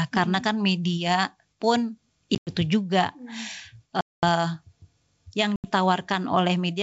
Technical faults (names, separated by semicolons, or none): packet loss on an ADPCM call